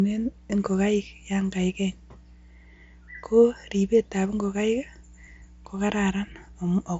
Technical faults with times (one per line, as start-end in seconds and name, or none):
0.00-7.00 mains hum